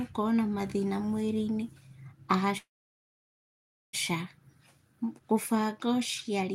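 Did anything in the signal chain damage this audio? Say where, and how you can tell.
Yes: a call audio freeze at the network stage, likely a starved jitter buffer. From 2.57 to 3.95 s the sound fades to silence, then resumes where it stopped. Unlike packet loss, nothing is skipped.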